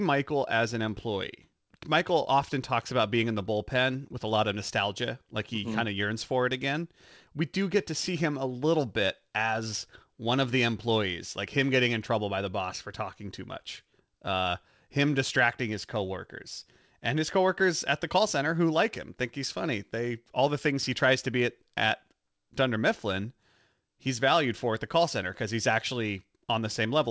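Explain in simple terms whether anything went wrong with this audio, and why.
Nothing went wrong; this is speech from an ordinary call.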